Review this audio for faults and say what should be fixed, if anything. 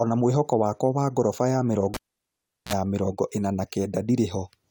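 A cable was pulled and plugged in from 1.94 to 2.73 s, after "wa goroba ya". A pop cuts the speech, and near silence holds for about 0.74 s. A 46 ms burst of 60 Hz mains buzz follows, then a second pop before "mĩrongo ĩna na". Secure the connectors and avoid touching live cables while recording.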